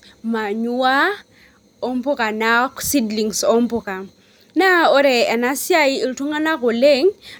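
A speech recording, and nothing technically wrong with it can be heard at any point.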